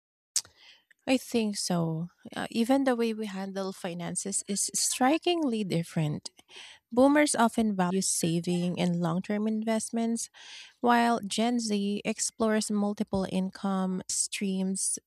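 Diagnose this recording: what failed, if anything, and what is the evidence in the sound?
The codec stage failed: compressed frames were skipped twice. At 7.90 s, just before "saving and long term", the speech jumps forward by about a tenth of a second, roughly four frames, and at 14.09 s it jumps again by about half that, roughly two frames. Whole frames, which fits a 24 ms frame length, were missing or rejected by the decoder.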